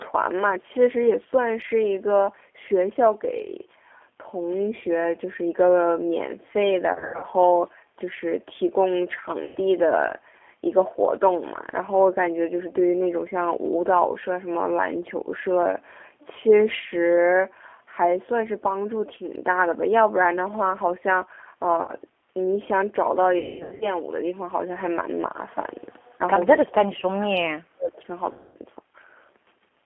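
G.729 codec damage runs through the whole speech recording: the 8 kbit/s coder rebuilds the voice from a filter and sparse pulses, so it sounds rough and synthetic, confined to about 250 Hz to 3.4 kHz. VoIP packet loss concealed by the speech codec occurs at 6.93 to 7.26 s, 9.44 to 9.58 s, 21.82 to 21.93 s, 23.39 to 23.86 s and 28.32 to 28.57 s, where the decoder stretches its last frames into a fading buzzy tone or coloured noise. The worst gap, near 23.4 s, has about 360 ms missing with a 210 ms unbroken stretch, and the voice stays weakened just after each one.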